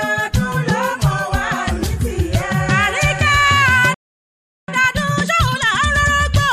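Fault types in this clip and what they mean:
Playback stall: The sound stops mid-flow at 3.94 s and stays silent until 4.68 s, a gap of about 0.74 s. The player likely ran out of data or had its thread blocked. Output resumes once it recovers.
Time-compressed catch-up: From 4.68 s to 6.14 s the player works off the backlog left by the stall. It cuts out small slices and cross-fades the joins. The sound runs 1.5 times fast, at normal pitch.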